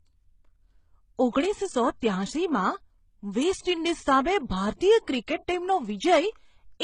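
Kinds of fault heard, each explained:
Transcoding between lossy codecs: The speech carries two layers of coding damage heard together across the whole clip. Nothing remains above 10 kHz. The damage fits a likely chain of MP3 at 32 kbit/s followed by HE-AAC at 16 kbit/s. The second codec compounds the first's artefacts.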